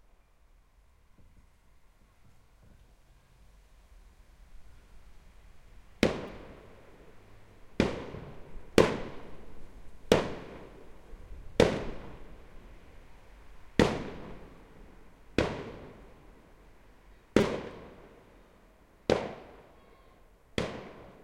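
New audio failed to reach the playback device in time, so it replayed its last buffer, a piece of about 5 ms, producing a repeated buffer at 6.28 to 6.29 s (three extra plays), 7.72 s (two), 9.94 s (one) and 17.41 to 17.43 s (four). Almost nothing is skipped; the sound is briefly delayed instead. Each repeat ends in a hard join, and at this tiny size the stutter comes across as a click or brief buzz.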